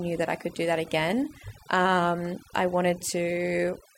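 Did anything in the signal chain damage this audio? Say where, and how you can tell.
Yes. Overdone noise removal at a processing stage affects the whole speech clip. Bands near the noise estimate are gated off, leaving near-silent gaps with twinkling specks. A spectrogram shows patchy holes and isolated flickering bins.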